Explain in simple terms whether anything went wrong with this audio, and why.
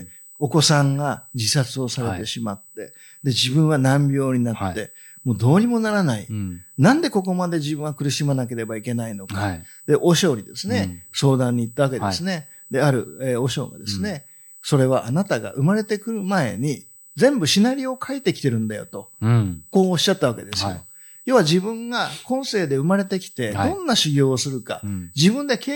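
Yes, something went wrong: a USB whine runs under the speech for the whole clip. It is a steady, high-pitched tone at 8 kHz, well below the speech in level. It comes from the USB connection drawing power in tiny bursts every 125 microseconds, which leaks into the audio through power or ground. Mains hum is a low buzz; this whine is a fixed, very high pitch that never changes.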